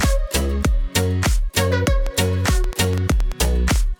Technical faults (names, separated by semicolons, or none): train of clicks